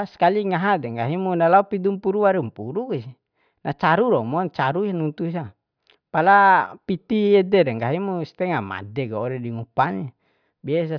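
Nothing in the recording stands out as a technical fault at any point.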